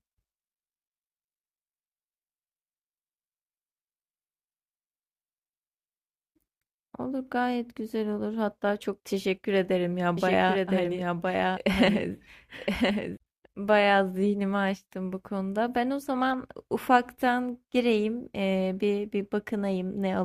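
A speech clip with a doubled audio track from 10.17 s to 13.17 s. A second full-band copy runs about a second behind, a few dB quieter, with no room colour. It starts and stops abruptly. The likely cause is a slower second capture path.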